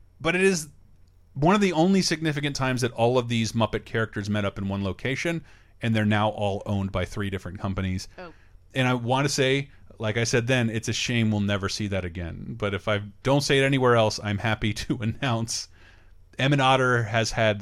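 No technical faults can be heard anywhere in the recording.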